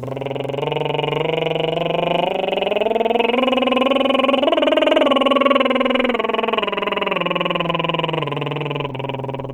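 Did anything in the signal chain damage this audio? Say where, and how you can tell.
No, nothing in this music points to damage anywhere.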